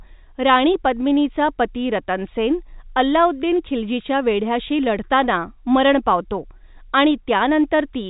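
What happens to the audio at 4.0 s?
Nothing goes wrong at 4.0 s: the speech carries on intact through the telephone-band G.711 coding, with the band stopping near 3.8 kHz.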